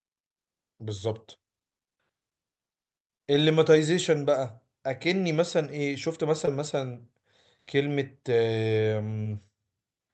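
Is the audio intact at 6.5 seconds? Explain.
No. From 6.45 to 6.49 s, short concealed packet loss left about 20 ms undelivered. The decoder extended the preceding sound to cover it, leaving a brief smear.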